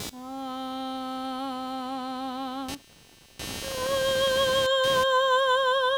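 Computer activity noise runs through the whole of this music clip as a buzzing, chirping layer pulsing at around 200 times a second and sitting roughly 15 dB below the music. Shifts in processor, graphics or mouse load pull on the ground the audio circuit shares with the computer, so the interference tracks what the machine is doing rather than anything in the music.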